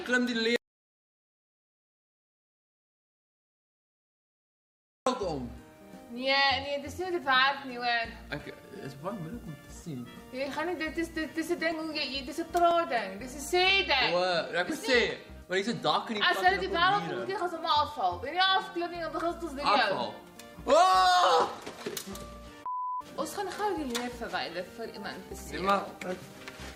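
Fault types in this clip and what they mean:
Audio dropout to silence: At 0.56 s the sound cuts off abruptly. It does not return until 5.07 s, leaving about 4.56 s of silence. No room tone or background survives in the gap. The likely cause is a lost input, such as a disconnected device, a failed link or an accidental mute, while the recorder kept writing silence. Whatever happened in that span is gone.
Overlap between stream segments: Four small clicks or skips occur at 11.72, 12.71, 13.70 and 14.69 s. They arrive about once a second, which fits stream segments 1 s long. At each joint, the time stamps of two segments overlap. The player trims that overlap away, though the sound was never actually doubled. A sliver of audio vanishes and the waveform jumps, producing the skip.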